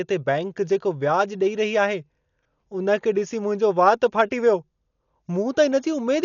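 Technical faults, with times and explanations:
Throughout, Dolby Digital compression: dull speech, nothing above 7.1 kHz, and rough, fluttering noise fill around tones rather than a clean low-pass, likely from a very low bitrate.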